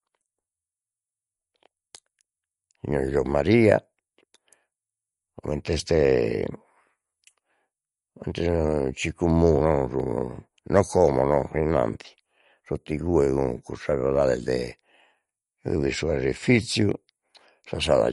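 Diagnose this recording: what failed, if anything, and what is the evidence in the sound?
The codec stage failed, and the cause is likely MP3 compression. The damage is plainly audible across the whole speech clip. Nothing survives above 11.2 kHz, so the top of the band is simply gone and the sound is dull. Weak spectral detail comes and goes between frames, giving a watery texture. That is what happens when the encoder runs short of bits, cuts the treble at a fixed point and drops quiet components. It fits a low bitrate around 48 kbps.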